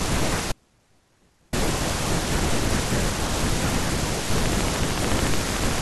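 A speech recording with two faults. Between 0.52 and 1.53 s the path most likely lost its wanted signal while staying live, an audio dropout to a faint residue: for about 1.0 s the speech cuts out abruptly, leaving only a faint trace roughly 40 dB below normal level rather than a natural pause. From 4.38 to 5.79 s, something injects a regular pulse, pointing to interference from nearby equipment or a faulty connection or power supply. This train of clicks, around twenty of them at 13.6 per second, peaks about 15 dB above the speech and is heard as steady ticking across the clip's closing stretch.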